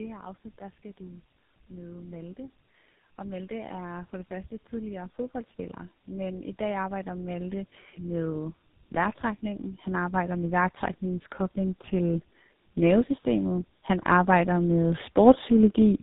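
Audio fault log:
Throughout: tandem speech coding. The speech sounds rough, muffled and warbly, with nothing above about 3.8 kHz. This fits two low-rate speech codecs in a row, likely a G.723.1-type coder followed by GSM full rate, with a plain telephone-band link between them. Each stage re-encodes the previous one's errors, so the artefacts compound. A spectrogram shows a hard ceiling near 3.8 kHz, smeared formants and grainy, flickering harmonics.
14.05–15.98 s: automatic gain rising. Over nearly two seconds the level climbs by about 4 dB, and the speech and background noise swell together. A gain control judged the input too quiet and slowly raised its gain. On the waveform, the envelope and the noise floor between phrases widen steadily across this span. A spectrogram shows the whole band brightening gradually rather than in a single step.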